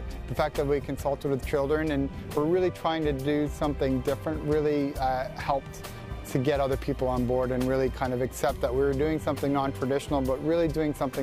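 Nothing in the audio stood out as a technical problem on listening.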